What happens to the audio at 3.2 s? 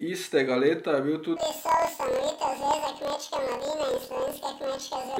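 At 3.2 s the speech is caught in a planar audio read as interleaved fault. It begins at 1.36 s and lasts to the end. Each block of about 26 ms stores all left samples, then all right samples. The player takes them as alternating pairs. So every block plays twice at double speed, left then right. The speech sits an octave high, under a robotic buzz at about 38 Hz, the block rate.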